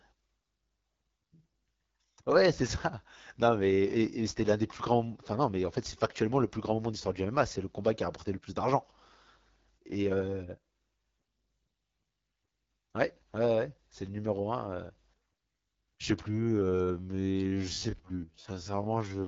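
All the way through, the speech has that AMR wideband (HD Voice) codec sound. It's plainly rough and raspy, the way the low modes get, which fits the 8.85 kbit/s setting. The pulse-driven vocal tract model can't keep up at that rate, and nothing comes through above 7 kHz.

From 16.29 s to the end at 19.28 s, the pace suddenly drops to about 0.55 times normal speed while the pitch holds, so it drags. That's likely a time-stretched section, with short chunks repeated to pad the length without shifting pitch.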